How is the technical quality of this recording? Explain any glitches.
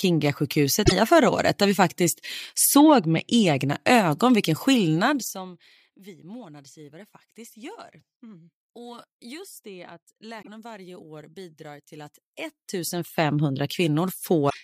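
The recording has clear technical faults: three short bursts of damaged data in the compressed stream and one stretch of zipper noise during a level drop.

Damaged data in a compressed stream occurs at 0.82 to 0.92 s, 10.39 to 10.48 s and 14.46 to 14.54 s. Corrupted bytes made the decoder misread frames and resynchronise, giving brief chirps or blips. A spectrogram shows sudden broadband smears. The waveform shows discontinuities.

Zipper noise runs from 4.94 to 5.60 s, as the level falls by about 25 dB in 1 dB steps, roughly 30 per second, with no smoothing. Each step clicks, producing a ticking texture. The waveform shows a staircase envelope, and a spectrogram shows faint regular vertical lines.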